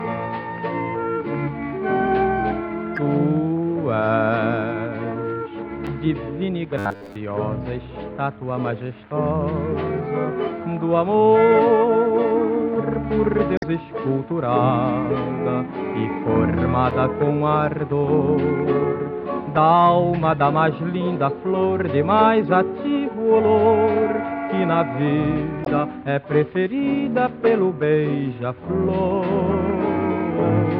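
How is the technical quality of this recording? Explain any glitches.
The recording has two kinds of fault: five short bursts of damaged data in a compressed stream, and one brief stretch of robotic sound from repeated short buffers.

Damaged data in a compressed stream occurs at 2.96 to 2.99 s, 5.87 s, 13.55 to 13.64 s, 16.91 s and 25.64 to 25.68 s. At each point part of the compressed stream has been corrupted. The decoder misreads those frames, loses its place and hunts for the next valid frame header. Each one is a quick chirp or blip.

Robotic sound from repeated short buffers runs from 6.79 to 7.16 s. Fresh audio is likely arriving too slowly here, so the playback fills the gap by looping the last few milliseconds, and most of the real material is skipped. The loops impose a fixed buzz at 100 Hz, which points to a repeated chunk of about 10 ms. The result is a rigid, metallic drone that still loosely follows the shape of the sound.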